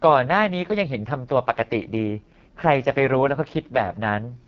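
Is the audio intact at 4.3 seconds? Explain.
No, the AMR wideband (HD Voice) codec damage runs through the whole clip: the speech sounds rough and raspy with nothing above 7.4 kHz, which fits its lowest 6.6 kbit/s mode.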